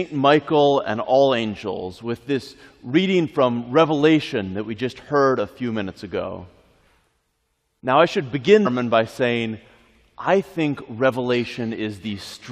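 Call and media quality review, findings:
Damaged data in a compressed stream at 8.65 to 8.67 s. Short blip, about 20 ms. Probable component: compressed file or stream feeding the decoder. Corrupted bytes at that point. Decoder misreads the bad frame, loses sync, then locks onto the next valid frame header. The brief garbled output while it resyncs is the blip heard.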